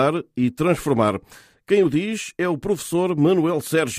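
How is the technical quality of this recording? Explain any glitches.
Nothing in the recording stood out as a technical problem on listening, so there are no glitches to explain.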